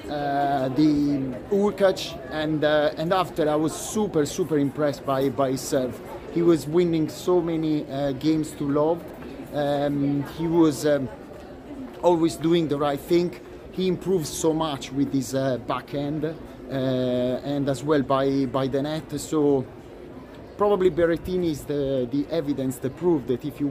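At 9.01 s the audio briefly jumbles for about a tenth of a second, ending at 9.10 s. A short stretch seems to stutter out of sequence. This is chunks out of order. One block of about 23 ms arrived three blocks late and played after the material meant to follow it. Nothing is missing, but the reordering creates three abrupt joins.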